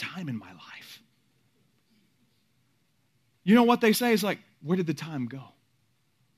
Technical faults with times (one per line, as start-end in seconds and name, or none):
0.42 damaged data in a compressed stream
3.95 damaged data in a compressed stream